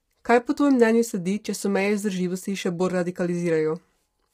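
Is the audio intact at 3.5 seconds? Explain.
No. At 3.5 seconds the speech carries the same damage heard through the whole clip, most likely low-delay AAC compression of the AAC-ELD kind used for video calls. At such a low bitrate, noise fills the gaps between the pitch harmonics and the voice sounds rough and grainy. The heavy degradation fits a bitrate around 24 kbps. Unlike a plain band limit, the top end isn't simply cut off but sounds lowered or synthetic.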